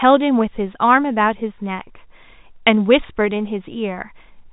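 No technical faults can be heard anywhere in the speech. It comes over a G.711 telephone coding path, so nothing above about 3.8 kHz gets through, and any coding damage is faint at most.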